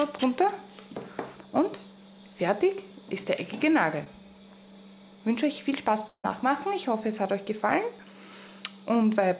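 Short concealed packet loss at 4.04 to 4.08 s: about 20 ms of audio arrived too late to decode, and the receiver bridged the gap by extending the preceding sound and then crossfading back. It comes across as a brief smear or wobble in the audio.

Long network dropout at 6.08 to 6.26 s, likely from audio failing to arrive over the network: roughly 160 ms is lost. The last sound is stretched into a fading buzz or hiss, followed by about 60 ms of silence before the audio resumes, already past the missing stretch. Throughout, nothing is heard above 4 kHz, which fits a G.711 A-law call path.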